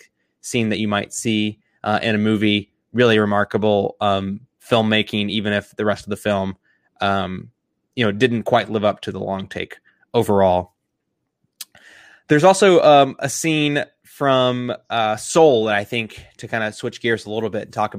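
No technical faults are audible.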